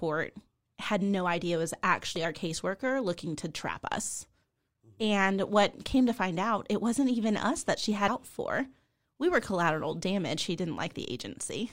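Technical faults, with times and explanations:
2.16 s, damaged data in a compressed stream: corrupted bytes in the encoded speech leave the decoder unable to read a frame, so it loses sync and hunts for the next frame header, producing a very brief blip between "no idea it was" and "our caseworker looking to".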